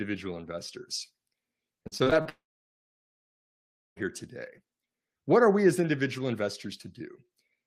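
From 1.83 to 2.27 s the speech turns choppy. This is repeated packet loss. Six short holes fall in under half a second, the longest about 40 ms. About 160 ms of audio is missing in all. The receiver fills each hole by stretching the last bit of sound. Those patches cover roughly a third of the stretch. So the speech stutters, and pieces of it never arrive.

At 2.29 s the sound cuts out until 3.98 s. This is a long network dropout. About 1.68 s of audio is lost. The receiver first carries the last sound on briefly as a fading buzz. Then about 1.58 s of silence follows. The speech resumes at 3.98 s with the lost part simply gone. A stall in the connection is the likely cause.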